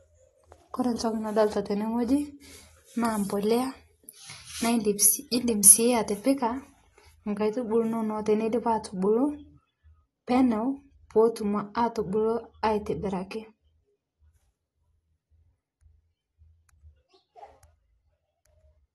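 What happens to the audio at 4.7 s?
At 4.7 s the sound falls inside a stretch of pre-emphasis left on, running from 3.05 to 6.41 s. The treble boost was never undone, so highs sit about 14 dB above 1 kHz at 10 kHz, matching a 75 µs FM curve. The speech turns thin, bright and hissy on sibilants. On a spectrogram the upper bands brighten abruptly across that span, and the waveform grows spikier.

Underneath, throughout the clip, the speech is dull and warbly with a fizzy edge on sibilants, and nothing sits above 12.1 kHz. A spectrogram shows a hard ceiling there. The likely cause is AAC compression at a low bitrate, around 32 kbps.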